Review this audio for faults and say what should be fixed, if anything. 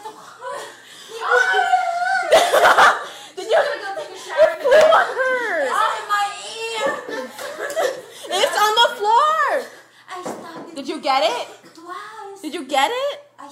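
One channel drops out at 4.55 to 4.60 s: for about 55 ms the sound falls abruptly by about 6 dB, then returns. This is likely one stereo channel briefly going silent, so the mono sum loses half of everything both channels shared.

Checking that channel's cable and connections, and watching both channel meters during capture, would stop a side from cutting out.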